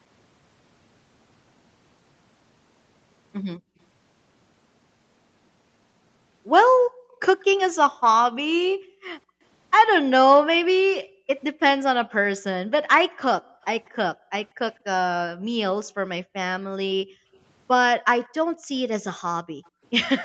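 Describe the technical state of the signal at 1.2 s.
At 1.2 s the speech is intact, with no fault present, only the normal band limit of call microphone processing, which leaves nothing above 8 kHz.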